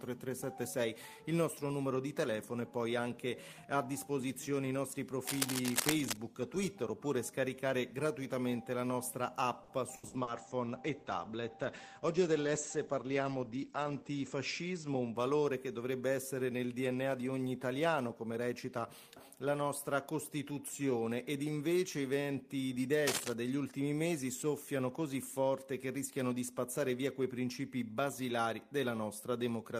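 From 5.26 to 6.18 s, dense, uneven scratching and rustling rides over the sound at about the same level as the signal itself. This is cable scratch noise, likely from a worn cable, connector or control being moved, so its contact resistance fluctuates rapidly.

Between 9.63 and 10.30 s the sound turns choppy and robotic, with four short holes, the longest about 70 ms. This is repeated packet loss: each missing piece is patched by stretching the previous sound, and roughly 30% of this stretch is filled that way.

Overlapping that, from 10.02 to 15.62 s, a call bitrate drop makes the sound rough, watery and muffled, with the top end cut from around 20 kHz to 8 kHz. The coarseness suggests the encoder fell from roughly 32 to 12 kbps after the bandwidth estimate dropped, staying at its lowest for about 4.1 s before recovering.

A second, briefer burst of cable scratch noise runs from 23.05 to 23.34 s, again as loud as the signal.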